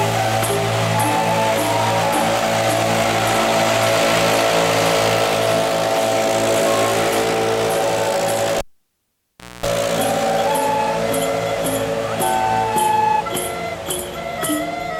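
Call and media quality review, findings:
Pop at 8.58 s, then near silence for about 1.03 s, including 60 Hz mains buzz for 0.24 s, second pop on return at 9.66 s. Cable pulled and plugged in: live connector disconnected, tip contacting first on reinsertion.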